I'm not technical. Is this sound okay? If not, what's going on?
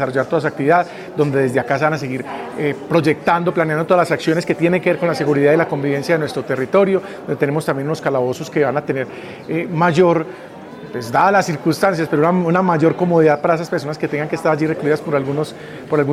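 Yes, nothing in this sound stood out as a problem when I listened.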